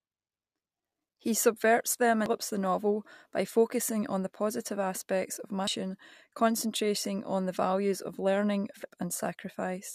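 A speech recording with three brief glitches: at 2.26 s, between "subverts them" and "the novel by focusing"; at 5.67 s, right after "the positive aspects of"; and at 8.83 s. These are damaged data in a compressed stream. Corrupted bytes in the encoded file make the decoder misread or discard the affected frames and lose sync, so it produces a brief glitch before it finds the next valid frame header.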